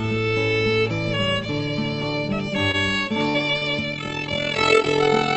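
A short stall from a late packet comes at 2.71 to 2.77 s. The packet missed its playout slot, so the jitter buffer ran dry and the last sound was stretched for about 21 ms before playback resumed where it stopped. Nothing is lost, but that sound hangs slightly too long.

A burst of packet loss follows at 3.30 to 3.37 s. The receiver extended the last sound for about 47 ms, fading it into a held buzz or hiss, then skipped ahead, so about 40 ms of audio is gone.

A second short stall from a late packet, at 3.58 to 3.65 s, holds the sound for about 34 ms with nothing dropped, giving another brief drag.

From 3.92 s to the end, overlap-add ripple sets in. The frames are rejoined with overlap weights that don't sum evenly, so the level rises and falls about 11 dB around 40 times a second. The result is a rough, robotic flutter on everything heard through the call codec's 8 kHz band.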